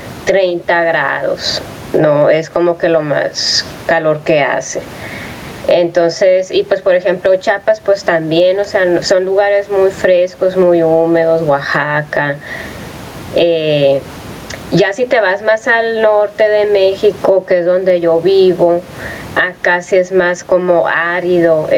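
Gain pumping runs throughout the speech, with the level swinging by around 20 dB. The likely cause is input gain set far too high, so a fast limiter clamps down on each loud syllable. The room noise sits about 34 dB below the speech, and the delivery is left squashed and flat in dynamics.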